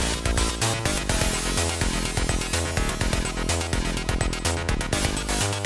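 No technical faults are audible.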